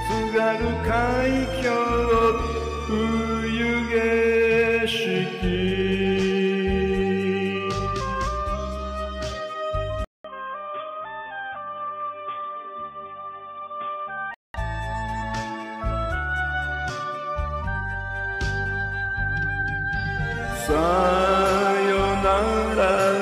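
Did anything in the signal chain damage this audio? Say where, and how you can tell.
Yes. At the capture stage the input likely switched to a poorer device, at 10.04 s, and back at 14.54 s. A 200 ms silence marks the first switch. From there nothing reaches above 3.6 kHz, so the sound turns dull and boxy. It also drops by roughly 5 dB and gains a new noise floor about 35 dB down. The narrower band, changed tone and different hiss all fit another microphone or a headset call profile.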